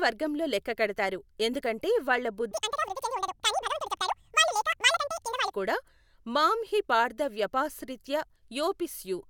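A speech clip in which the audio from 2.51 s to 5.51 s is read two samples at a time (double speed). Over that three-second span the playback runs at twice the rate and the pitch rises by 12 semitones, a full octave, because the reader is treating each pair of consecutive samples as a single frame, as if the data were stereo or held samples twice as wide.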